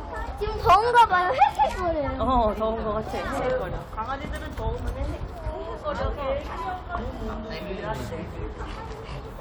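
From 0.69 to 1.04 s the sound hits hard clipping, driven about 6 dB past full scale, so its peaks are sliced flat; a shorter, milder clip of about 2 dB follows at 1.42–1.44 s. The waveform shows squared-off tops, and the spectrogram shows harmonic smearing up high.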